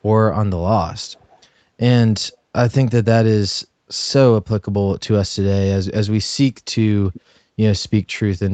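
A far-end echo canceller likely let part of its loudspeaker pickup through, producing echo leak: from 1.15 to 1.39 s a barely audible copy of the speech trails by about 400 ms, and from 7.13 to 7.21 s a clearer scrap returns about 380 ms late.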